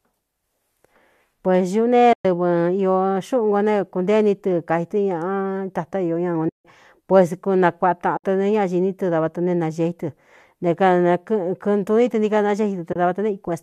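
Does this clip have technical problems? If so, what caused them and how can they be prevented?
Yes. Four short dropouts come from AAC frame loss with muting, at 2.13–2.25 s (120 ms), 6.49–6.65 s just after "tatá ió ña ūn" (160 ms), 8.17–8.24 s (70 ms), and 12.93–12.96 s just after "ní tɨ nií ka" (30 ms). Each time, packets carrying the encoded audio went missing, and the decoder filled the missing spectrum with silence. The overlapping windows fade the speech out and back in over about a frame, so each gap is a soft-edged hole. The gap lengths are all multiples of 10 ms, which fits the short frames of the low-delay AAC this clip likely passed through. On a spectrogram each gap is a clean vertical band empty at every frequency, with slightly blurred edges. On the waveform the envelope tapers quickly to near silence and then rises again. Adding forward error correction or packet redundancy, or using a decoder that conceals losses by extrapolating from neighbouring frames instead of muting, would prevent these holes.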